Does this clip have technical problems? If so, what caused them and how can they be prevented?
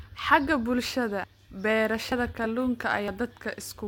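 Yes. At 2.12 s and again at 3.08 s the speech jumps abruptly, skipping roughly 40 ms and then closer to 70 ms. Both are likely a dropped buffer (overrun): audio was not collected before the hardware overwrote it, so the two sides are spliced directly. Unlike an underrun, no silence or gap is inserted, just a sudden skip forward. Using larger buffers and a higher-priority capture thread prevents this.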